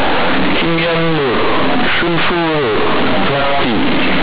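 From start to finish the speech comes through as harsh, very loud, buzzy distortion, with a heavy noise bed filling every pause so that quiet moments are nearly as strong as the loudest syllables. This is companded audio read as linear. The bytes are μ-law, the telephone coding with everything above 4 kHz cut away, but they are being played as plain linear 8-bit samples without expansion. Each sign change therefore throws the output across about half its range, flattening the level differences and badly warping the waveform.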